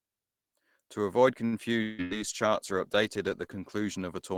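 A short stall from a late packet at 1.45 to 1.55 s holds the sound for about 69 ms while the buffer waits. Nothing is lost, but the audio runs 69 ms later afterwards.

A long network dropout, likely, follows at 1.82 to 2.01 s. The receiver stretches the last sound into a fading buzz or hiss for about 159 ms. About 180 ms is skipped, and the delay shrinks slightly.

A call bitrate drop begins at 1.95 s, from 32 to 17 kbps, and stays at its lowest for about 1.8 s. The sound turns coarse through to the end.

A burst of packet loss at 2.04 to 2.14 s bridges 64 ms with a fading held sound, then resumes with about 60 ms missing.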